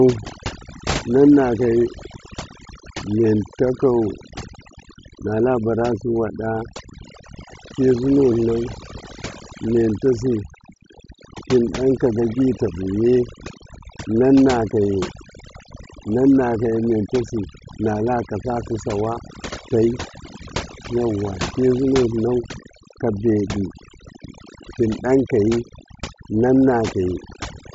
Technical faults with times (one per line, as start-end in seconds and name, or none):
0.00-27.74 overdone noise removal